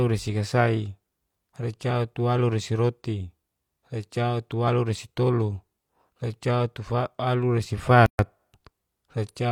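A gap at a join of encoded pieces appears at 8.06 s, where the speech drops out for 130 ms until 8.19 s. Separately encoded segments were spliced untrimmed, so encoder start-up delay and final-frame padding leave a silence with smeared edges before the speech resumes where it stopped.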